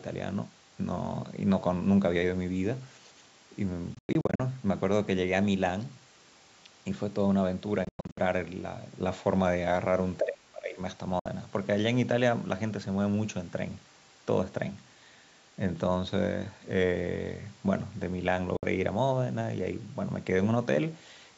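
Speech passing through a call chain, band-limited to nothing above 8 kHz by the call's microphone processing, runs into two faults. A likely Bluetooth dropout, with packets failing to reach the headphones in time, punches silent holes that resume as if the audio had played on. At 3.95–4.40 s about 264 ms goes missing in scattered gaps, the longest about 102 ms. At 7.85–8.18 s about 244 ms is lost the same way, and shorter 61 ms holes follow at 11.19 s and 18.57 s. Between 10.19 and 10.79 s, speech is suppressed in double talk, likely because the echo canceller could not tell this talker from loudspeaker echo while both sides spoke. The speech dips by as much as roughly 30 dB.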